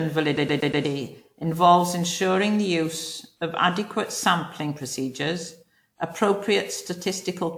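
From the first moment the speech has a swirly, hollow, smeared quality, with blurred consonant attacks, far rougher than a 128 kbit/s WMA-style encode would sound once. This is generation loss, likely from around ten rounds of lossy decoding and re-encoding, each requantising on a shifted frame grid so noise and spectral holes pile up.

From 0.37 to 0.85 s comes a rapid, even stutter: a 120 ms fragment plays four times with a tiny mute at each jump, just before "involves ensuring". That is a CD stuck on one turn, where a scratch makes the laser jump back a track at the same spot every rotation.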